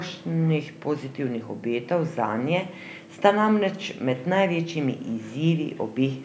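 No technical faults can be heard in this speech. The call microphone processing is working as intended, with the lowest bass trimmed away and nothing above 8 kHz.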